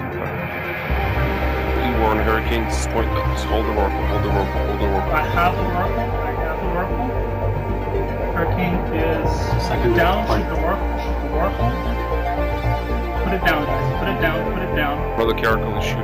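Throughout the clip, a crude rate conversion appears to have raised the sample rate, consistent with 32 kHz to 48 kHz, by repeating nearest samples without filtering. The resulting error, roughly 30 dB below the signal, produces an inharmonic gritty fizz that tracks loud and bright passages.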